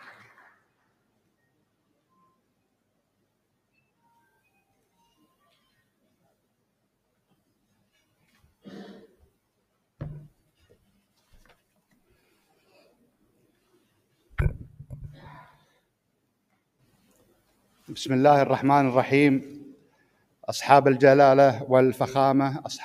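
The noise suppressor misjudged parts of the sound as noise and turned them down harder than everything around them, so held or fading material loses level. It happens first from 0.00 to 0.63 s, dipping by about 16 dB, then from 16.8 to 17.31 s with about 15 dB for a brief stretch, and from 19.74 to 20.46 s with about 18 dB across roughly half a second.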